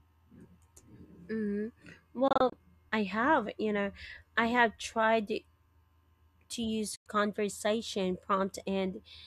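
Digital broadcast dropouts cut the speech twice: scattered short holes between 2.28 and 2.53 s, about 96 ms lost in total, consistent with four failed frames, then one mute at 6.96–7.06 s. The receiver muted within 3 ms and lost that audio.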